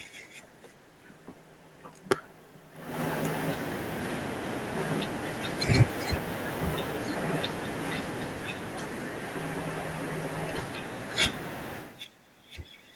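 No technical faults can be heard in this speech recording.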